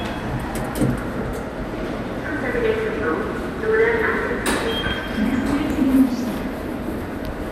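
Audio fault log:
Throughout: MP2 compression, likely the cause of the dull, gurgly texture. Nothing comes through above about 15.9 kHz, so the top end sounds shaved off. The granular roughness sits right on the surface, which fits a low rate of around 80 kbps. Layer II splits the signal into 32 sub-bands, and with so few bits to share out, the upper bands get dropped and the remaining ones are quantised coarsely. That's where the smeary, watery grit comes from.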